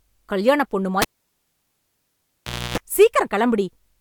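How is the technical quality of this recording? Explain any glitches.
Two problems.

From 1.02 to 2.78 s there's a cable pulled and plugged in. A pop, then roughly 1.7 s of near silence, then about 290 ms of 60 Hz mains buzz while just the tip makes contact, and a second pop as the sound comes back.

Around 3.01 to 3.04 s there's a brief bit of hard clipping. The peaks ran about 2 dB past what the stage could pass, so they got sliced flat, adding high harmonics you hear as a short crackle on that loud moment.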